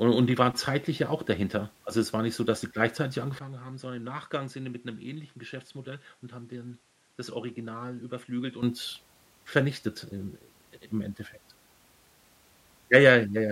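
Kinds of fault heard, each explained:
Input switched to a poorer device: After "so dass sie gleichzeitig" the sound turns dull, losing everything above 11.9 kHz and dropping roughly 10 dB. Likely another microphone took over.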